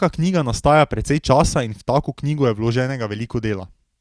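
A short speech recording with no audible technical fault anywhere in its signal.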